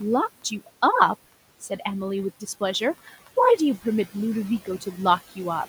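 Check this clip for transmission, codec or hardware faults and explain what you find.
One processing fault runs through the whole clip: noise suppressor artifacts. The background noise sinks away in the gaps and swells back under the speech. A noise suppressor is estimating the steady room noise, about 19 dB below the speech, and pulling down each frequency band it judges to be noise, by about 16 dB, frame by frame.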